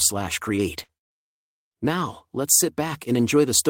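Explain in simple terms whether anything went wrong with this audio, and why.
Twice in quick succession the speech breaks up. From 0.83 to 0.92 s a sound is briefly stretched into a held buzz or hiss, and again from 0.97 to 1.12 s, this time for longer and dying away toward near-silence. Each time the talking then picks up a little further along, with a piece missing: about 40 ms the first time and about 120 ms the second. This is a burst of packet loss. Chunks of audio failed to arrive in time, so the player stretched out the last sound it had, fading it down, before skipping ahead.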